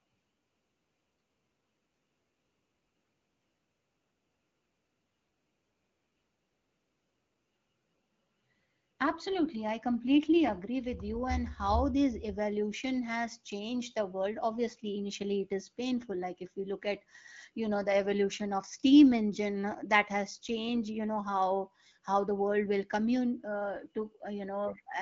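No faults found in this speech; it is carried over an AMR wideband (HD Voice) link at 12.65 kbit/s, with only light coding damage audible.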